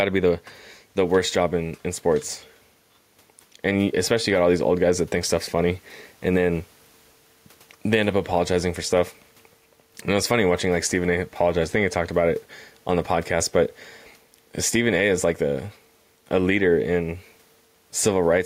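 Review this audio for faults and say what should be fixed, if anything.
Gain pumping runs through the whole recording. The likely cause is input gain set far too high for the microphone, so a fast limiter or compressor clamps down on every loud syllable and then releases in the pauses. The level swings by around 5 dB as a result. The room noise sits about 44 dB below the speech, and the speech sounds squashed. To prevent it, lower the input gain until the limiter no longer acts on normal speech peaks.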